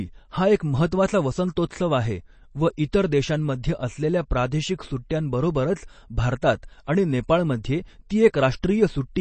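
Speech that sounds dull and watery throughout, with nothing above 8.3 kHz and swirly, plainly audible smearing, likely from MP3 compression at a low bitrate around 32 kbps. From 0.57 to 0.60 s, just before "महत्त्वाचा वसंतोत्सव आहे व", a short hiss of about 33 ms precedes the attack, which is pre-echo from codec noise spread across a whole block.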